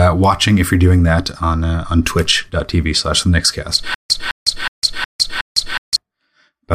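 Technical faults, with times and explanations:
3.94–5.96 s: stutter with silent gaps. A 210 ms speech fragment repeats five times, each followed by 155 ms of digital silence, a 366 ms cycle. A stalled stream likely replayed its last fragment at each retry; the speech due in that span is lost.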